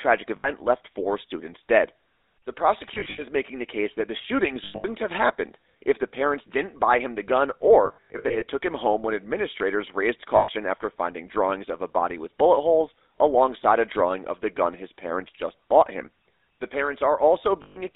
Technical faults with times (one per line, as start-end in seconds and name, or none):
0.00-17.95 GSM full-rate codec
0.36-0.50 lost GSM frames
2.94-3.23 lost GSM frames
4.64-4.85 lost GSM frames
7.86-8.44 lost GSM frames
10.36-10.49 lost GSM frames
17.62-17.78 lost GSM frames